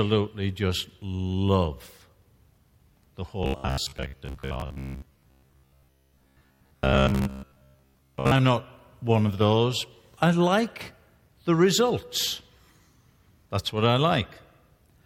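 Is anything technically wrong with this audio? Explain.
Yes. From 3.43 s to 8.41 s, ending just before "not one of those", the speech has robotic sound from repeated short buffers. It turns into a rigid, metallic buzz fixed at 66.8 Hz that only loosely tracks the syllables. The likely cause is audio arriving too seldom, so playback keeps looping the last segment of about 15 ms. For most of that stretch the real audio is skipped, and the loop period sets the fixed buzz pitch.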